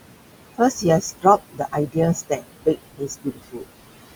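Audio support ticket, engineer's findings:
Noise suppressor artifacts, whole clip. Residual room noise, only about 10 to 13 dB under the speech, keeps getting pulled down and released frame by frame. Background sinks in gaps, rises under speech. Probable component: noise suppression stage. Mechanism: per-band gain cuts on anything classed as steady noise, with noise this close to speech level.

Speech cut by the noise suppressor at 0.0 to 0.85 s, 1.01 to 1.97 s, and 2.15 s to the end. Deepest drops about 21, 20 and 21 dB. Roughly 0.7 s, 0.7 s and 2 s affected. Soft consonants, word endings and quieter passages come out swallowed or faint. Same component. Speech energy misread as noise and attenuated together with the background.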